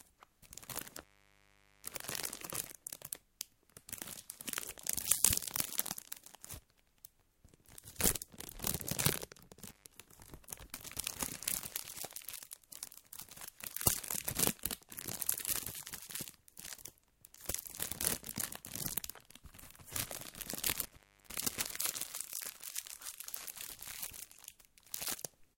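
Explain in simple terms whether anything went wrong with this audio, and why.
Intermittent contact, a loose cable or plug briefly opening, cuts the sound at 0.85–2.03 s, 9.67–9.89 s and 20.78–21.47 s. Unlike a clean dropout, each cut crackles at its edges.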